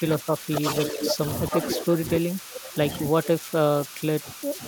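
Converter idle tones sit under the whole speech clip: a whistle around 1.5 kHz, about 16 dB below the speech, from an undithered delta-sigma converter cycling through repeating bit patterns. Unlike mains hum, its pitch is high and unrelated to 50 or 60 Hz.

From 0.0 to 0.63 s the speech dips by up to roughly 15 dB, and it does so again from 0.92 to 4.67 s across about three seconds in all. This is speech suppressed in double talk, likely an echo canceller attenuating both sides while they overlap. It sounds like pieces of the voice being turned down.

An echo leak overlaps it at 0.55 to 1.14 s and again at 1.52 to 1.84 s. A copy of the speech returns 286 ms late and about 5 dB quieter, likely loudspeaker pickup the canceller failed to remove. The fixed delay separates it from room reverberation.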